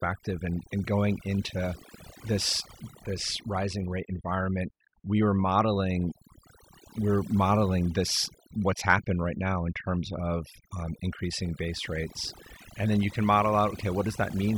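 Across the whole recording, overdone noise removal leaves gaps between phrases near-silent but dotted with twinkling specks. Bands close to the estimated noise floor are pulled down individually. A noise gate would instead mute everything at once.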